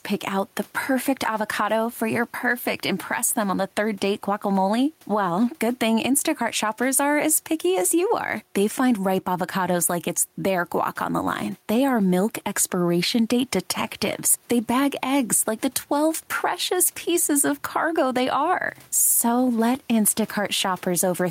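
Gain pumping runs through the whole speech recording: the background rises in each pause and drops back as soon as speech resumes, a swing of around 5 dB. The likely cause is input gain set far too high, with a fast limiter or compressor clamping down on every loud syllable and releasing in the gaps. The room noise, sitting about 38 dB below the speech, makes this breathing audible. Loud and quiet passages land close together in level, leaving the speech squashed.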